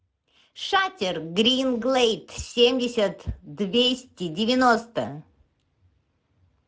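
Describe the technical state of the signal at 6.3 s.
At 6.3 s the speech carries Speex codec damage, as it does across the whole clip. Speex is a CELP coder. It models the voice with a filter and codes the excitation that drives it. Here too few bits go to that excitation, and the damage is plainly audible. Voiced sounds come out rough, hoarse and grainy rather than clean. The degree of damage fits a mid-range bitrate near 17 kbps.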